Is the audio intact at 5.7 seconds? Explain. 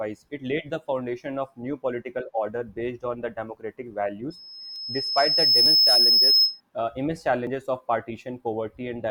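No. A piercing tone near 5.2 kHz is sounding there, part of a loudspeaker feedback squeal from 4.30 to 6.61 s that swells over about a second and a half to roughly 10 dB above the speech, ending just before "uh immense". The microphone is picking up its own loudspeaker, and the loop gain at that frequency exceeds one, so the tone keeps feeding itself.

At 5.66 s the sound jumps ahead, with roughly 20 ms missing. This is likely a dropped buffer (overrun): the samples were overwritten before being read, and the two sides were spliced together.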